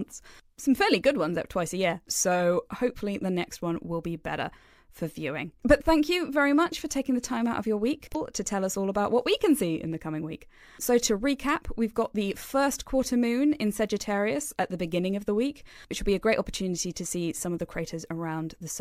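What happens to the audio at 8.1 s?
From 8.11 to 8.16 s, damaged data in the compressed stream makes the decoder lose frame sync, producing a brief chirp, squawk, click or short hole.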